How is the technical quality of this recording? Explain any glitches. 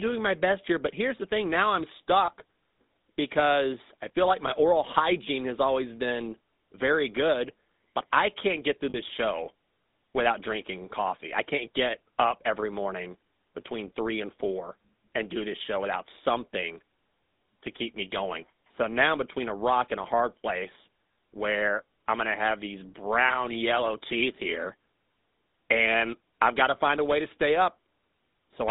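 The recording is phone-grade, with plainly audible codec damage throughout and three short glitches.

Throughout, the GSM full-rate codec, at 13 kbps, leaves a buzzy, gravelly roughness. It rebuilds the voice from a coarse pulse excitation. On a spectrogram, energy sits between 200 Hz and 3.7 kHz, with blank space above and smeared harmonics.

At 2.26 s after "the thing now I'm", at 8.9 s after "I can't get through", and at 23.28 s between "going to have these" and "yellow teeth here", lost GSM frames occur. Each loss was concealed by repeating the last good frame. The lost audio lasts about 20 ms, 40 ms and 20 ms, which fits one, two and one 20 ms frames. Each sounds like a brief metallic ring. On a spectrogram it shows as a short stretch of frozen, unchanging spectrum.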